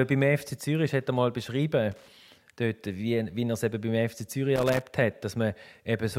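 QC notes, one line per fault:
1.92–2.10 s and 4.56–4.82 s, loose connector crackle: two short, irregular bursts of scratchy crackle break up the speech, the first ending just before "dort wie". A worn or dirty contact is rapidly making and breaking, chopping the signal into jagged fragments.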